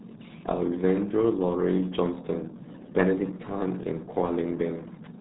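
Speech encoded with the RealAudio 14.4 codec at what sounds like 8 kbit/s: nothing above 3.8 kHz survives, leaving it heavily muffled and gargly throughout.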